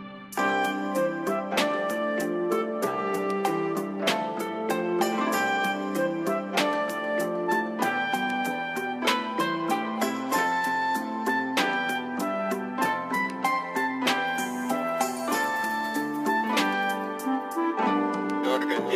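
Nothing technically wrong can be heard anywhere in this clip. There are no faults to place in time and no causes to trace.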